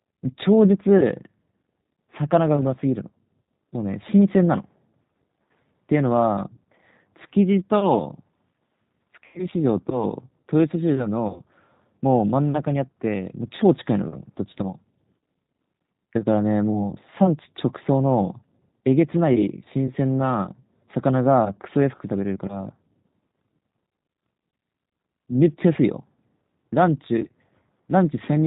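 From start to finish the speech has that G.729 codec sound, and the damage is plainly audible. Everything above 4 kHz is gone, so the voice sounds boxed in and a bit dull. The codec rebuilds each short frame from a vocal tract filter, a pitch predictor and a handful of pulses, which leaves a rough, slightly synthetic edge. That character is what you'd expect from a low-rate setup around 8 kbit/s.

Then there's VoIP packet loss concealed by the speech codec, three times. The first runs from 9.26 to 9.41 s and the second from 11.28 to 11.41 s. Each points to roughly 80 ms of missing audio. In both places the decoder fills the gap by carrying its last pitch and filter forward. It turns the speech into a smeared, buzzy tone or coloured noise that sags in level. The voice stays a little weak and off for a moment after the real audio returns, because each frame is built on the one before it. 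The third, at 15.19 s, is tiny, about 20 ms, and is concealed the same way.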